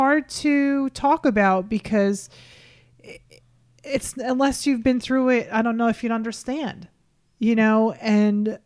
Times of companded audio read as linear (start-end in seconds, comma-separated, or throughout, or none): none